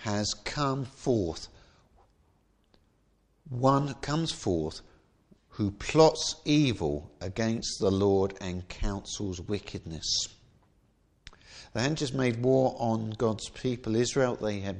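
No audible technical faults occur anywhere in the recording.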